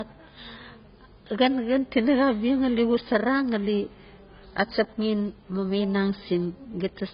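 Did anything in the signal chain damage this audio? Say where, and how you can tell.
Yes: AAC compression throughout, at the codec stage. Nothing above 5.1 kHz and heavy smearing point to a likely AAC-LC encode at a very low bitrate.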